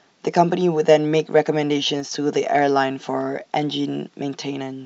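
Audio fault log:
2.00–2.11 s, sudden gain jump: the digital gain was likely switched down about 4 dB with no ramp, so the speech and background noise drop together abruptly.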